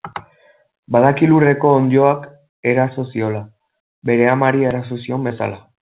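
At 5.28 to 5.32 s, short concealed packet loss: 20 ms went missing and was patched from the preceding sound, leaving a brief smear rather than a silent gap.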